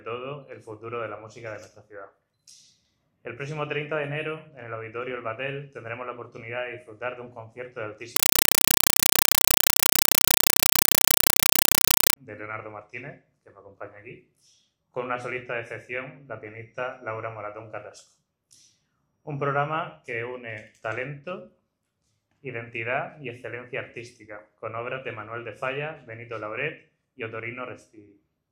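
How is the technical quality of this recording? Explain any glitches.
The recording has one serious glitch. From 8.16 to 12.16 s, a compressed stream is played as audio: a Dolby Digital bitstream, consistent with AC-3 at about 256 kbps, reaches the output undecoded. Each 5.33 ms burst of raw data is followed by zero padding, 31.25 times a second, producing very loud, chattering static that replaces the sound.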